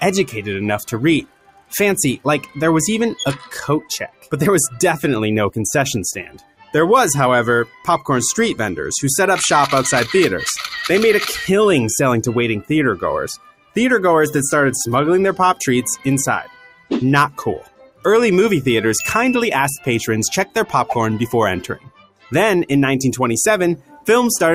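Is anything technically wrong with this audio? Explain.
Yes. A noise suppressor applied to music or sounds runs throughout: a speech-tuned suppressor treats sustained tones, ambience and decay as noise, so level swings by around 10 dB. Onsets pass while held parts and tails sink, giving a pumping, thinning texture.

Sound cut by the noise suppressor occurs at 1.22–4.32 s, 6.24–6.74 s, 7.66–7.87 s, 13.37–13.76 s, 16.44–18.05 s, 21.77–22.32 s and 23.78–24.07 s. Here the suppressor mistook the audio for noise and pulled it down by about 11 to 18 dB, so sustained material drops away and decays are cut short.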